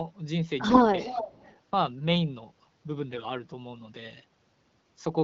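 From 0.69 to 0.82 s the speech turns briefly hoarse and gargly while keeping its pitch and level. These are AMR bit errors: weakly protected bits in a few frames arrived flipped, roughly one in ten, misplacing excitation pulses and skewing fine gain and spectral values. From 0.99 to 1.56 s a copy of the voice trails 345 ms behind, around 10 dB below the speech, likely an echo leak where a loudspeaker end's canceller let its own pickup return. The same scratchy AMR bit errors recur from 3.1 to 3.25 s at a slightly lower error rate, over the AMR wideband (HD Voice) codec at 12.65 kbit/s.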